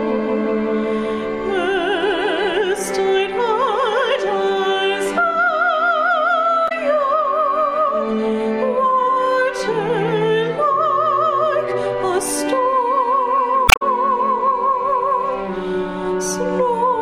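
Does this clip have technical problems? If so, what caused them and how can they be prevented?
Yes. A brief garbled blip breaks into the sound at 6.65 to 6.72 s, and a longer one, about 0.17 s, at 13.65 to 13.82 s. Both come from damaged data in a compressed stream: bytes in those stretches were lost or corrupted, so the decoder misread the affected frames, lost sync and briefly produced nonsense until it locked onto the next valid frame header. Transferring and storing the file with checksums or error-checked transport, and re-fetching damaged segments, prevents this.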